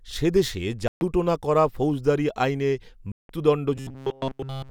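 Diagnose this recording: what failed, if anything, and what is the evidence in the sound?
Two gaps break the speech, from 0.88 to 1.01 s (about 130 ms) and from 3.12 to 3.29 s (about 174 ms). The output goes silent with hard edges, then resumes further along, as if the audio had kept playing underneath. This is likely a Bluetooth dropout at the playback stage: packets missed their deadline at the headphones and were discarded. The gap lengths fit roughly nine and twelve lost packets.

From 3.76 s to the end, the speech turns into a rigid, metallic buzz locked at 134 Hz. It still loosely tracks the speech contour, and the whole stretch is affected. This is robotic sound from repeated short buffers, likely at the driver or buffer stage. Fresh audio arrived too slowly, so the same short block was looped while real audio was skipped. A 134 Hz buzz points to a repeated block of about 7.5 ms.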